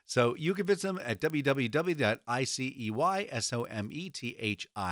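Right from the start and all the way through, there's a steady tick running under the speech at 20 times a second. That's the resampler restarting on every block: each 50 ms chunk gets converted on its own, so the filter never sees the real neighbouring samples at the edges and leaves a small error there. The upsampling looks to be 24 kHz to 48 kHz. It buzzes while there's signal and drops out in the gaps.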